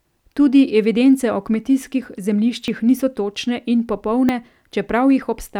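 At 2.68 s and 4.29 s the speech skips ahead by roughly 10 ms with no gap, likely a dropped buffer (overrun) losing captured samples.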